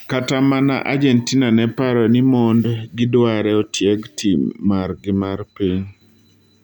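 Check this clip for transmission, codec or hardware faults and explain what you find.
Nothing in the speech stood out on listening as a transmission, codec or hardware problem.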